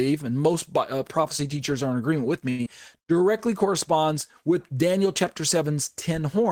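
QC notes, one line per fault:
2.49–2.61 s, short stall from a late packet: a packet arrived late, the jitter buffer ran dry, and the receiver held the last sound for 96 ms before resuming at the same point. On a spectrogram the harmonics flatten into a frozen band.
2.65–2.68 s, skip ahead: around 70 ms of speech was dropped while later audio was already queued, so playback jumps forward and joins the two sides almost directly. The waveform shows an abrupt splice and the spectrogram an abrupt shift in formant pattern.
2.96–3.19 s, jitter buffer slow-down: the receiver rebuilt its reserve by repeating single pitch periods, adding 51 ms and slowing this stretch to 82% speed at unchanged pitch. The speech sounds drawn out, and the spectrogram shows stretched formants with evenly spaced harmonics.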